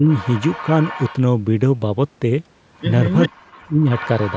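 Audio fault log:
0.00–0.07 s and 3.28–3.85 s, speech suppressed in double talk: likely an echo canceller that couldn't tell its own talker from loudspeaker echo while both sides spoke, so it turned everything down. The opening dips about 15 dB for a brief moment, and the later stretch falls by as much as 40 dB, half a second of sound nearly cut out.
0.08–1.15 s, 3.13–3.29 s and 3.97–4.37 s, echo leak: a loudspeaker's echo canceller likely let part of its microphone pickup through, so the audio returns as a delayed copy trailing about 397 ms behind, some 15 dB quieter than the main sound.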